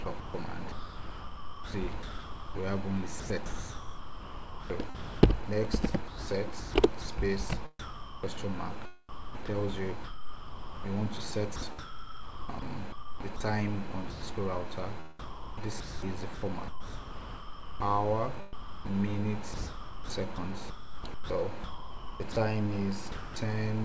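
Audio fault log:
0.04–14.22 s, sound chopped by the voice detector. The sound keeps dropping out and coming back. About 6.5 s of it is replaced by a smooth synthetic hiss. The likely cause is a sender's voice detector gating transmission and filling gaps with comfort noise.
15.19–23.36 s, sound chopped by the voice detector. The same choppy gating likely returns. About 4 s is lost to comfort noise. The band-limited tone fits a G.722 call path, with nothing above 8 kHz.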